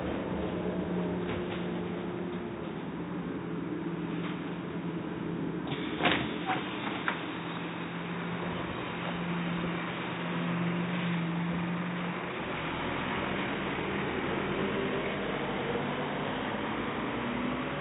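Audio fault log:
No faults detected in this recording of sounds.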